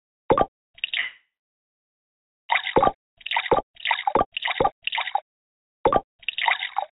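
At 1.0 s the audio stalls in a call audio freeze lasting until 2.51 s. The last sound carries on briefly as a fading buzz, then about 1.24 s of silence follows. Playback resumes where it stopped. Nothing is lost; a 1.49 s gap is inserted. Delayed packets likely starved the jitter buffer.

From 3.24 s to 5.88 s comes a time-stretched section. The pace jumps to 1.81 times normal while pitch holds steady. It sounds rushed. Software likely dropped short pieces to shorten it. Throughout, the narrow call band leaves nothing above 4 kHz.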